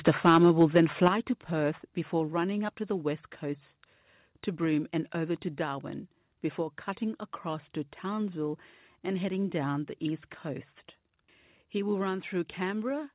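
From 0.01 to 1.08 s the speech is harsh and crackly on its loudest syllables. This is microphone overload. The input was likely set too high, driving peaks about 5 dB past the converter's limit. A small share of samples have their tops flattened.

The microphone volume is stepped down at 0.08, 1.08, 2.28, 5.01 and 12.09 s. Each step is an abrupt drop, of about 3, 7, 2, 2 and 1 dB. The cause is likely the call software cutting input gain. Speech and background fall together, within the narrow band below 4 kHz.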